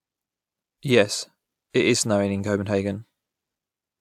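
No technical faults are audible.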